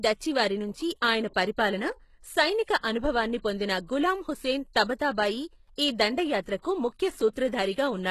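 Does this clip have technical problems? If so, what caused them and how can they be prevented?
Yes. The speech carries plainly audible coding damage throughout. Nothing is present above 12.3 kHz. The treble sounds synthetic, and s sounds turn gritty and metallic. This is likely HE-AAC compression. The codec keeps only the lower spectrum and rebuilds the top by copying lower bands upward under a coarse envelope. The copied harmonics do not match the real ones, which fits a very low bitrate around 16 kbps. To prevent it, encode at a higher bitrate with a full-band codec such as AAC-LC.

Pre-echo occurs three times: 2.78 to 2.83 s, 6.62 to 6.65 s, and 7.33 to 7.35 s. Each sharp onset is preceded by a brief hiss. That hiss lasts 55 ms, 27 ms and 21 ms respectively. The onsets sound softened and smeared. The transform codec spreads its quantisation noise across a whole block. When an attack lands late in a block, noise sized for the loud part leaks into the quiet moment before it. 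To prevent it, use more bits or a codec with good block switching.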